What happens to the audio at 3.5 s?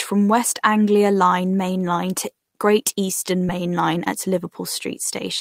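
A short concealed packet loss occurs from 3.45 to 3.49 s: about 20 ms of the speech never reached the decoder, and the receiver filled roughly 16 ms by extending the preceding sound before blending back, leaving a brief smear.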